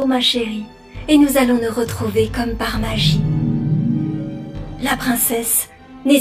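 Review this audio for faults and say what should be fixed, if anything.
Throughout the clip the sound is rough and slightly doubled, from channel delay (comb filtering). One channel runs around 20 ms behind the other, and summing them to mono cancels evenly spaced frequencies, with the first notch near 30 Hz. Align the channels before any mono fold-down.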